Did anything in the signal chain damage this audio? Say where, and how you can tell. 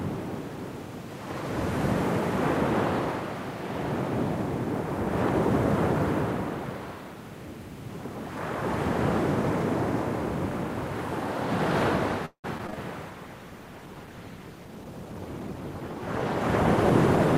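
Yes. The network stage is the first problem: repeated packet loss (robotic sound) between 12.25 and 12.76 s. Four holes fall in that half second, the longest 184 ms. The receiver papers over 230 ms by stretching the last good audio, and 60 ms is simply dropped, so nearly half the stretch is concealed. The result is a choppy stutter with pieces missing. On a spectrogram it shows as smeared, repeated horizontal bands and abrupt blank slivers; the waveform shows looped cycles and short flat drops.

At the codec stage, a call bitrate drop begins at 13.10 s and lasts to the end of the clip. The encoder falls from 96 to 16 kbps after the bandwidth estimate collapses, so Opus quantises coarsely and trims the top of the band. The sound turns dull and watery. A spectrogram shows the upper kHz region going abruptly dark at 13.10 s and staying empty, with blotchy, grainy texture below the cut. The waveform envelope barely changes, which points to coding rather than level.

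Call processing at the jitter buffer adds a speed-up from 14.66 to 15.62 s. The buffer had built up excess delay, so the receiver repeatedly cut out short pitch-period-sized slices, roughly a fifth of a second in total. Playback ran at about 118% speed with pitch unchanged, so the sound feels hurried. The waveform shows tiny splice points where cycles were excised, and on a spectrogram events in that stretch sit closer together in time while their frequencies stay put.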